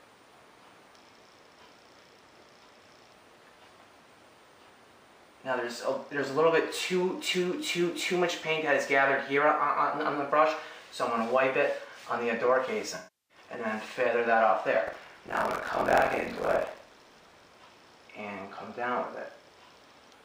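At 3.55 to 3.57 s, and again from 12.95 to 13.38 s, AAC frame loss with concealment appears. The decoder had no data for those stretches, about 21 ms and then about 341 ms, and rebuilt them from the last good spectrum. The short gap sounds like a brief smeared, noisy blip. The longer one sags toward silence before the sound returns. On a spectrogram, the first gap shows as a thin blurred column. The second shows as a frozen, fading block of spectrum with energy decaying across it.

From 14.86 to 17.48 s there is buffer tearing. The writing and reading sides of the output ring buffer have drifted, so each period is spliced from fresh audio and from audio heard a moment earlier. Roughly half of each period is stale, by around 50 ms, with a hard join at both edges. The result is a steady robotic buzz at 43.1 Hz, which fits a 1024-sample buffer. In the waveform, discontinuities repeat at that interval. 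The spectrogram shows vertical click lines and sidebands spaced at 43.1 Hz.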